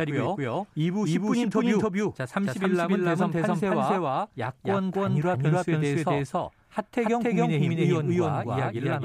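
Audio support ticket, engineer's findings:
Speech heard twice throughout: second full-band copy trails by roughly a third of a second at near-equal level, no decay or room colour, so it reads as a flat, hard slapback rather than reverb. Likely a second capture route with extra latency, or an edit leaving two misaligned copies. Doubled audio track. Check routing and monitoring for a duplicate feed.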